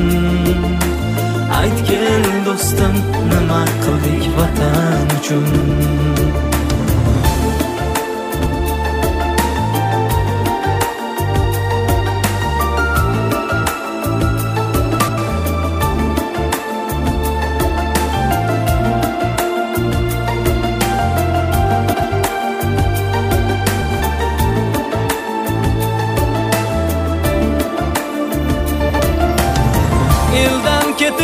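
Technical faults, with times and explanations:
5.51–5.71, 8.39–8.54, 14.99–15.18, 21.93–22.13, 23.81–24.01 and 28.80–29.00 s: frames out of order. Two adjacent blocks, each about 93 ms (70 ms at 8.39 s), play swapped, giving a garbled flutter. Unlike a dropout or skip, nothing is lost and timing holds.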